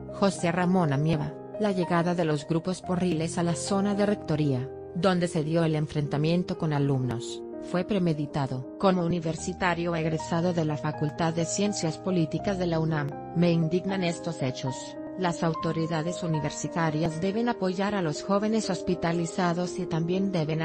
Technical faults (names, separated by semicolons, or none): overlap between stream segments